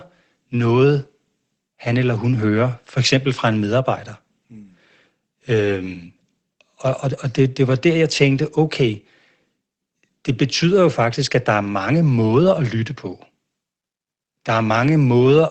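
Speech, with no technical faults to be heard.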